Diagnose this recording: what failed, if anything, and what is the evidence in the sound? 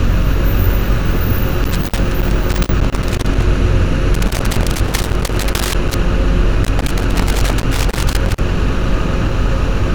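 The failure is in the analogue wiring: loose connector crackle. Irregular bursts of scratching and crackle run from 1.64 to 3.43 s, 4.14 to 5.94 s and 6.63 to 8.39 s. A worn or dirty contact keeps breaking, chopping the signal.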